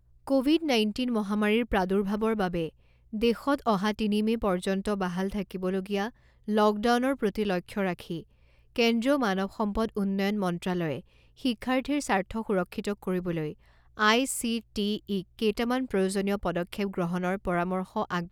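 A steady mains hum runs under the speech from start to finish, pitched at 60 Hz with a few low harmonics stacked above it. It sits roughly 35 dB below the speech, so it is quiet but constant, most noticeable in the pauses between phrases. The cause is power-line energy leaking into the signal path, typically through a ground loop between connected equipment or magnetic coupling from a nearby transformer.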